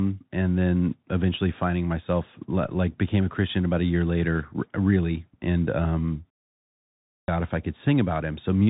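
A narrow, boxy band runs through the whole recording: nothing above about 3.8 kHz survives, sibilants come out scratchy, and a fine granular hiss sits under the speech, with loud bright sounds roughening where they outrun the coder. That is the Bluetooth CVSD headset codec, which sends a single up-or-down bit per sample and adapts its step size, and the damage here fits a 64 kbps headset link.

At 2.64 s, between "then eventually finding myself" and "became a", a single low thump lands while the speech carries on untouched. This is a DC step: the waveform's zero line suddenly jumps to a new offset. The thump is all that is heard; the offset then bleeds away through a high-pass at around 5 Hz instead of holding.

After a pause of 0.71 s, the sound resumes abruptly at 7.28 s on "if I", with its opening missing. This is a clipped start after a pause: the output device went to sleep during the silence and took time to wake, swallowing the first 342 ms of sound from 6.94 s, so the word bursts in without its onset.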